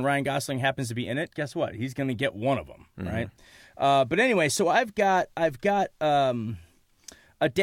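Nothing in this speech recording points to a technical fault at any point.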